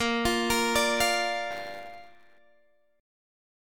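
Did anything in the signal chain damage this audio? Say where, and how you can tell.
Yes. Buffer tearing runs from 1.50 to 2.38 s, a stage fault in the driver or buffer. A rattling, robotic buzz at 100 Hz sits on the sound there and only while the sound is present, which points to a 10 ms buffer period. The writing and reading sides of the ring buffer have slipped, so each period carries a small slice, roughly 15%, of audio from about 20 ms earlier, with hard joins at both edges.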